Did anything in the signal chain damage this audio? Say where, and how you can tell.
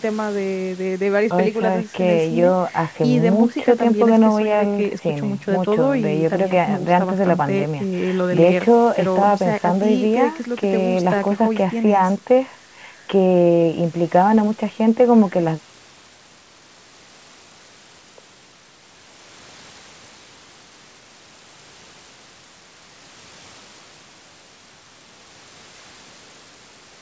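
No, nothing in the chain damaged this speech.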